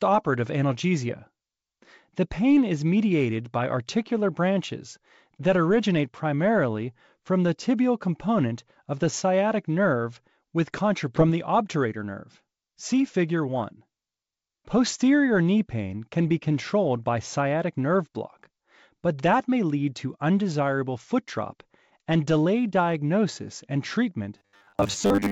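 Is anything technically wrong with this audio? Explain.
Yes, two faults stand out.

At 11.16 to 11.18 s, just after "the sciatic nerve with", there is a skip ahead. Roughly 0.7 s of audio was dropped, either on the way or by the jitter buffer, so playback jumps forward with no gap. Both sides are butted together and a chunk of speech is simply missing.

From 24.38 to 25.31 s there is robotic sound from repeated short buffers. Fresh audio likely arrived too slowly and the last 10 ms was replayed over and over to cover most of that stretch. That loop imposes a steady 100 Hz buzz, so the speech turns metallic and rigid while loosely tracking its original shape.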